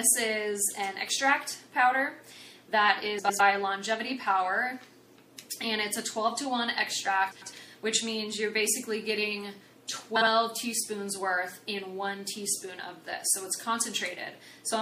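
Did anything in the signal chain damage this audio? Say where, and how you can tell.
Yes. Codec stage: throughout, the audio sounds watery and swirly, with dulled treble and smeared attacks, likely MP3 compression at a low bitrate, around 64 kbps.

Network or storage stage: frames out of order at 3.18–3.40, 7.31–7.53 and 10.16–10.27 s. Adjacent blocks of 105 ms (52 ms last) play swapped, producing a garbled flutter.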